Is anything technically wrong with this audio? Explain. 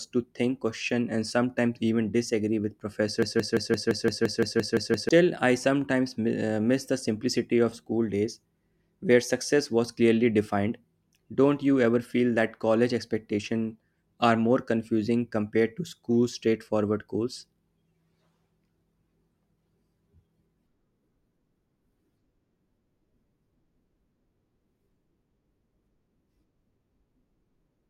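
Yes, there's one problem. Right after "sometimes even disagree with", from 3.23 to 5.09 s, you get a broken-record loop: a 0.17 s scrap of speech repeats exactly, back to back, eleven times before "I sometimes" picks up. That's likely the player or stream stalling and resending the last fragment it held, so whatever should have played in those couple of seconds is lost, replaced by a rapid, mechanical stutter.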